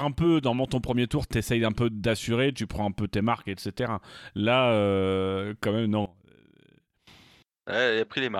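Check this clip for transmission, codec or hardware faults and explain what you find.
There's one fault here, and it's a clear one. Right after "quand même", from about 6.06 s to 7.07 s, the speech collapses by about 21 dB and leaves only a faint trace before coming back. That's the classic sign of one channel inverted: with one stereo side likely flipped in polarity, everything common to both sides cancels when they're summed to mono, so the centred voice and its low end almost disappear.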